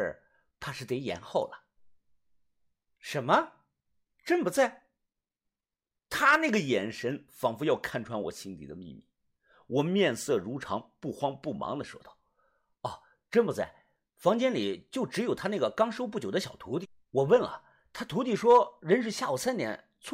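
Nothing in this speech recording stands out as a technical fault, so there's no problem to point to anywhere along the way.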